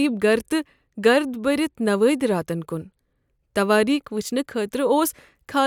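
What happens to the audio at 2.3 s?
Nothing goes wrong at 2.3 s; the speech there plays through intact, with no dropout, click, distortion or other fault.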